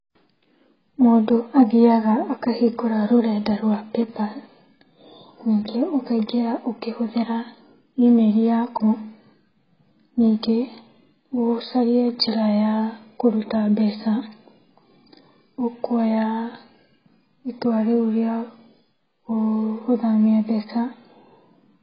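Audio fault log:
Throughout: AAC compression. The speech is heavily damaged, with nothing above 5.3 kHz, so sibilants lose their edge and turn to a fizzy, warbling smear where bands have been emptied or filled with substitute noise. That points to AAC-LC at a very low rate, something like 12 kbps, as the likely cause. A plain low-pass filter would only dull the top, with no swirling texture below the cut-off.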